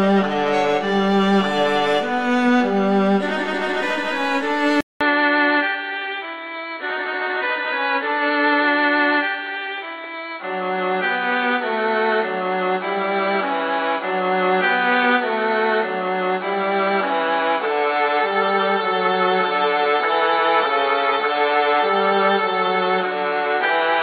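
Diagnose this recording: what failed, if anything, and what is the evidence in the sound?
At 4.81 s the audio drops out for 200 ms, and from there to the end nothing gets through above 4.4 kHz, so everything sounds dull and boxy. There's also a new noise floor, around 30 dB under the signal, while overall level barely moves. That points at the capture device or driver stage: most likely an input switched to a poorer device, something like a headset in call mode with its narrower band and own hiss.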